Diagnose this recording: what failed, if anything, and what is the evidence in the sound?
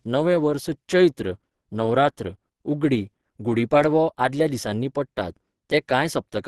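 Codec stage: Opus compression is the likely cause of the damage heard across the whole speech clip. The sound is hoarse and muffled, which fits a low rate near 16 kbps in Opus's hybrid speech mode. A spectrogram shows a hard ceiling at 12.2 kHz.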